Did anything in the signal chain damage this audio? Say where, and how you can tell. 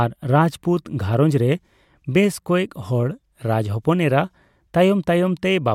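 No, nothing in the signal chain damaged this recording.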